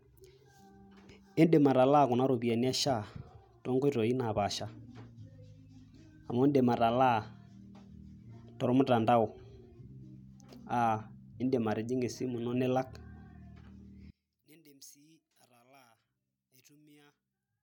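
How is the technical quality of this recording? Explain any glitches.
The speech clip has one clear fault, starting at 14.10 s and running to the end at 17.63 s. The level drops by about 31 dB and the voice turns faint. The likely cause is one channel inverted: the common centre content cancels when the channels are summed to mono.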